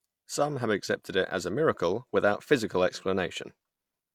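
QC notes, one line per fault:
throughout: low-bitrate audio saved at a high bitrate. The speech keeps earlier coding artefacts, likely from a roughly 48 kbit/s HE-AAC pass, which the high-rate MP3 cannot undo.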